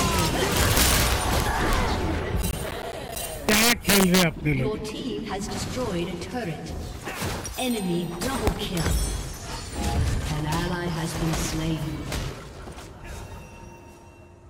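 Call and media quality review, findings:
Integer overflow, 0.19–1.73 s, 3.49–4.23 s and 8.47–8.77 s: gain stage or mix sum exceeds integer range, about 4, 6 and 3 dB over, and wraps sign instead of limiting. Loud peaks flip full-scale, producing violent cracks far harsher than clipping.

Processor overload crackle, 2.42–3.16 s: audio processing thread missing repeated buffer deadlines, roughly fifteen misses of about 10 ms buffers, each replaced by silence. Hard-edged dropouts stack into gritty tearing crackle over the sound, ending once load clears.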